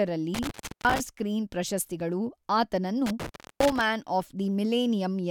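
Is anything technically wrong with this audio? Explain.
Yes. The speech drops out twice, from 0.34 to 1.00 s and from 3.06 to 3.84 s, with crackle at the edges and faint hiss while the line is silent, about 0.36 s and 0.31 s respectively. This is intermittent contact: a loose cable or plug briefly breaks the signal path, so the audio vanishes rather than fading. The crackles come from the connection scraping open and closed.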